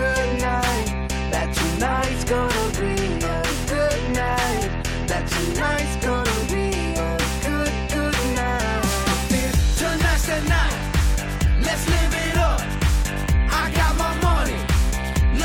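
The signal holds steady for its whole duration, with nothing in its level, continuity or tonal balance that points to a problem in the recording or transmission chain.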